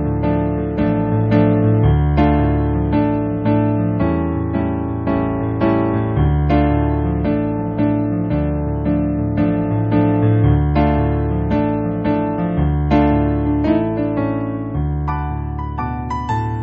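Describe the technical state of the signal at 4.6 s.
At 4.6 s the signal is intact, with no audible dropout, distortion, glitch or other technical fault at that point.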